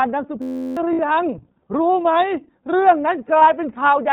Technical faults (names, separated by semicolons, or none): iLBC codec; system hang loop; lost iLBC frames